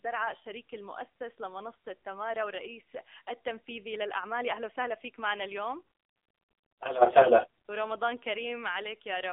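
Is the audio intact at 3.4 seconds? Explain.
No. At 3.4 seconds the speech carries AMR narrowband mobile codec damage, which runs through the whole clip. The sound passes through a narrow phone line of roughly 300 Hz to 3.6 kHz, and nothing above 3.6 kHz survives. The codec rebuilds the voice from a vocal-tract model excited by a few pulses per frame. The damage is plainly audible, buzzy and synthetic, which fits a low 7.4 kbps mode.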